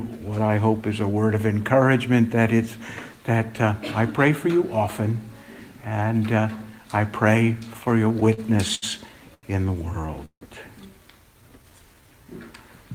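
From 7.73 to 8.84 s the audio shows repeated stalls (stutter). Packets arrived late or too slowly, so the jitter buffer kept running empty and the receiver kept extending the last sound to cover the waits. There are eleven small gaps, about 188 ms in total, the longest 72 ms. Roughly a sixth of the stretch is filler. It drags and hiccups. On a spectrogram, short smeared patches repeat the preceding frames, and the longest ones taper in level.

At 9.34 to 9.45 s comes a short stall from a late packet. One packet was missing when it was due, the buffer ran dry, and the receiver stretched the last sound for about 88 ms before resuming from the same point. A sound is held too long, with a faint buzz or dip. The waveform shows one repeating segment, and the spectrogram shows flat, horizontally smeared harmonics.

From 10.25 to 10.43 s there is a call audio freeze. The sound stops moving and turns into a fading buzzy continuation, then drops to silence for about 80 ms, roughly 157 ms in all. 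The cause is likely packets held up in transit and the buffer emptying. Playback then picks up where it stopped. On the waveform, a decaying periodic tail runs into a flat gap. On a spectrogram, frozen horizontal bands fade to blank.

From 11.36 to 12.26 s a jitter buffer slow-down stretches the audio by about 124 ms, so it plays at 87% speed without any change in pitch. The buffer was refilling its reserve by repeating single pitch periods and slivers of pauses. The result is drawn-out sound. A spectrogram shows harmonics at unchanged frequencies but elongated in time, and the waveform shows near-identical cycles repeated in runs.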